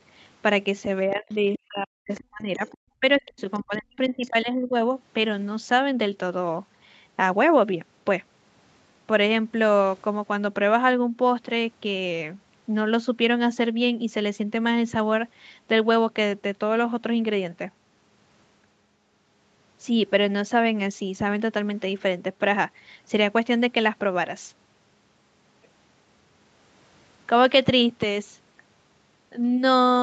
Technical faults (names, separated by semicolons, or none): speech suppressed in double talk; other side's voice leaking through